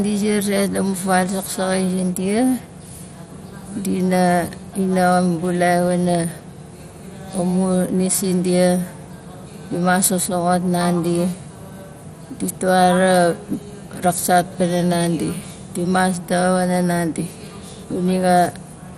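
MP2 compression runs throughout the speech: nothing reaches above 15.6 kHz, and a dull, gurgling, granular roughness is plainly audible. This likely comes from Layer II coding at a low rate, perhaps 64 kbps, switching off upper sub-bands and coarsely quantising those remaining.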